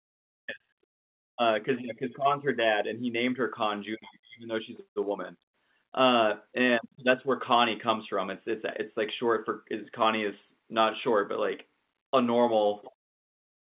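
Speech carried over mu-law G.711 telephone coding at 8 kHz, with its bandwidth ending at 4 kHz as that format requires and no technical faults present.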